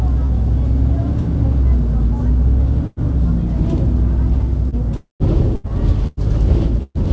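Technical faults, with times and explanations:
0.26–0.32 s and 4.69–4.75 s, short concealed packet loss: a brief smear in the sound as about 30 ms failed to arrive and the receiver bridged the hole by extending the preceding audio.
2.87–3.01 s, 5.56–5.70 s, 6.07–6.20 s and 6.83–6.98 s, burst of packet loss: a held buzz or fading hiss, the last one dropping into about 50 ms of silence. Between 90 and 120 ms went missing each time, padded by continuing the last sound before playback resumed further on.
4.96–5.23 s, long network dropout: the sound trails into a fading tail, then about 160 ms of silence before it returns with a stretch gone. The likely cause is roughly 240 ms of audio never arriving.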